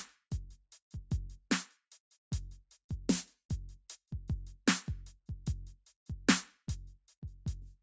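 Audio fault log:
throughout, noise suppressor applied to music or sounds: a speech-tuned noise suppressor stayed on over this music, and it treats sustained tones, room ambience and reverb tails as noise to be pulled down. Attacks punch through, then held notes and decays get ducked by around 5 dB, so the level pumps and the sound thins between hits. The call microphone processing caps everything at 8 kHz, but that band limit is just the path, not the suppressor.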